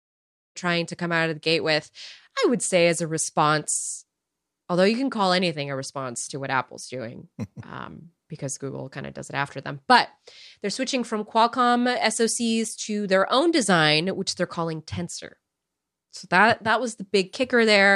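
The speech raises no technical problem, opening with a smooth fade-in from around half a second that reaches full level by 0.58 s, with no click or hard edge.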